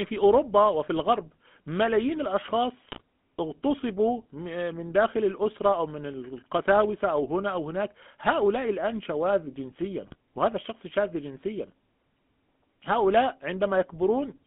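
The whole clip runs through the GSM full-rate codec, which fits about 13 kbps. The voice is squeezed into a 200 Hz to 3.4 kHz band, with a plainly buzzy, gravelly roughness throughout.

GSM bit errors hit at 2.86 to 3.01 s and again at 10.04 to 10.15 s. Corrupted frames scramble the decoder's spectrum and level values, so the speech briefly squawks and gargles.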